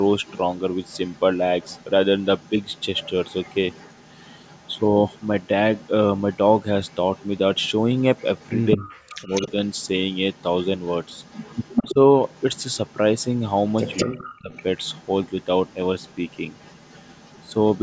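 Right from the start there's echo leak: a faint copy of the speech trailing about 206 ms behind, at 0.0–1.2 s, 1.61–1.88 s, 2.21–5.89 s and 6.32–8.9 s, sitting about 25 dB down. It's likely a far-end speakerphone whose echo canceller let some pickup slip back. Overlapping that, speech suppressed in double talk hits at 8.76–9.42 s, with the voice ducking hard, roughly 40 dB, likely as the canceller clamps both talkers. The echo then runs on from 9.23 to 17.79 s, a bit louder at about 20 dB down, with more suppression dips at 11.92–11.97 s (shallow, about 10 dB) and 14.04–14.51 s (deep again).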